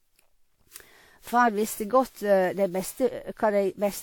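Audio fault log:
Throughout: generation loss. The speech sounds swirly and hollow, with smeared consonant attacks and a watery texture. This is more degradation than a single encode would leave, yet the band still reaches about 20.1 kHz, so bandwidth is not the problem. The likely cause is repeated decoding and re-encoding, around seven passes through a WMA-type codec at what sounds like 96 kbit/s. Each pass requantises on a shifted frame grid, so noise accumulates.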